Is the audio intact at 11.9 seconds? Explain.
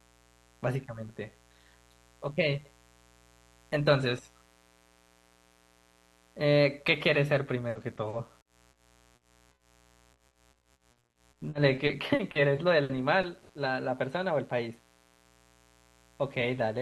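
No. The moment falls inside a stretch of repeated packet loss (robotic sound) running from 10.13 to 13.51 s. Packets kept arriving late or not at all, and each hole was patched by extending the preceding sound, about 600 ms of patched audio in all, roughly 18% of the span, the longest gap 80 ms. The speech there turns choppy, with pieces missing.

Underneath, a mains buzz persists throughout, a raspy tone built on 60 Hz and its harmonics reaching into the kilohertz range, roughly 35 dB below the speech. Sharp switching spikes twice per mains cycle, from a dimmer, rectifier or unshielded line, produce that steady rasp.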